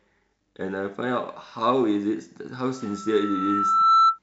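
At 2.75 s a microphone picks up its own loudspeaker, causing loudspeaker feedback squeal: a 1.3 kHz tone swells over about a second, reaching about 10 dB above the speech by 4.19 s.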